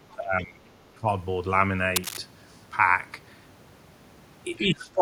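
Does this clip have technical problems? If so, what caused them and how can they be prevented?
Yes. Speech suppressed in double talk dips the voice by around 15 to 20 dB from 0.14 to 0.62 s, from 0.94 to 1.07 s, and from 4.58 s to the end. It is likely an echo canceller turning the talker down while both sides spoke. A canceller tuned for better double-talk detection, or a headset, prevents it.

Cable scratch noise adds ragged, uneven rustling bursts from 1.96 to 2.17 s, only a few decibels below the speech. It is likely a worn cable or connector being moved. It sounds irregular and gritty, unlike steady hiss or a single click. Replacing the cable or connector and securing it prevents this.

The other side's voice leaking through appears faintly from 4.56 to 4.67 s, roughly 20 dB below the speech. It is likely loudspeaker sound left behind by the echo canceller. It is a separate voice rather than a reverberant tail of the talker. 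Headphones or better acoustic isolation prevent it.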